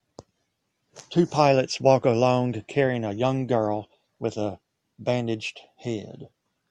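Listening through the speech, nothing stood out as a technical fault at any point.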